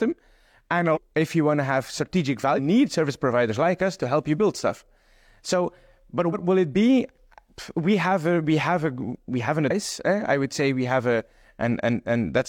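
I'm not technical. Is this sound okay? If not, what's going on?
No. This clip has damaged data in a compressed stream: a few pieces of the file got corrupted, so the player briefly lost its place and searched for clean data. You hear short chirps or blips, each about 50 ms, at 0.92 s (just before "if you want to"), 2.54 s, 6.29 s and 9.66 s.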